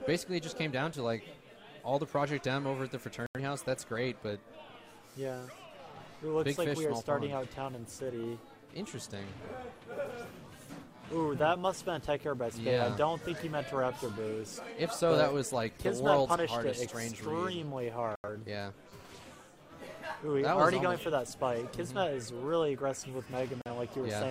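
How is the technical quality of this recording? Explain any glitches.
The recording has three short digital broadcast dropouts, at 3.26–3.39 s, 18.16–18.29 s and 23.62–23.69 s. The receiver muted when frames went missing: about 85 ms lost in the first two, about 43 ms in the last, consistent with whole frames of roughly 43 ms. Each one sounds like a brief hole before the sound resumes, and it shows as a flat gap in the waveform and a blank vertical band across the spectrogram.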